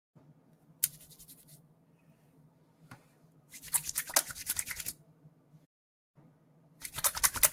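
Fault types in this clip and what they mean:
Noise suppressor applied to music or sounds: A speech-oriented noise suppressor was left running on this non-speech material, so it keeps mistaking steady parts and ambience for background noise and pulling them down. The gain it takes away swings by around 10 dB as the sound changes, which gives the whole clip an uneven, breathing quality. Sharp onsets get through fine, but anything sustained sinks and the room tail feels thinned and clipped short.
Sound cut by the noise suppressor: Twice the suppressor judges the actual sound to be noise and ducks it harder than the surrounding audio, from 0.34 to 0.82 s and again from 5.11 to 5.66 s. Each dip lasts about half a second and goes down by about 5 dB at its deepest. You hear the level sag under the held or fading part while sudden sounds mostly come through.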